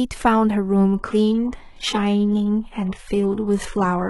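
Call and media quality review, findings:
Adaptive stream at a lower bitrate, 0.95 s to end: player dropped to a low-bitrate rendition mid-stream, abrupt switch, no gap. Speech loses treble, upper band turns synthetic, artefacts rise. Sound points to HE-AAC near 12 kbit/s.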